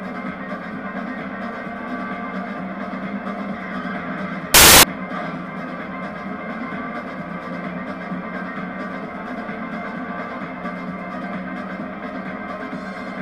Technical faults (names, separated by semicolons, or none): samples built from the wrong bytes